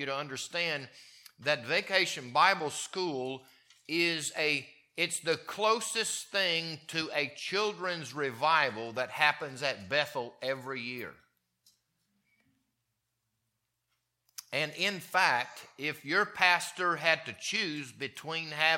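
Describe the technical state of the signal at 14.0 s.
Nothing goes wrong at 14.0 s; the signal is intact at that moment.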